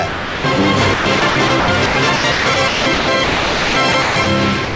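From 0.08 to 0.44 s, the sound drops out for 360 ms and gives way to steady synthetic noise. This is sound dropped by the voice detector, likely because the sender judged the signal to be background, stopped transmitting, and let the receiver fill in comfort noise. The same thing happens from 4.64 s to the end at 4.76 s, where the last 121 ms are replaced by comfort noise.

Between 0.94 and 4.26 s, the sound is chopped by the voice detector. The sender likely toggled between transmitting and muting more than once, so about 1.66 s of this 3.3 s stretch is comfort noise. The result is choppy, with two or more holes.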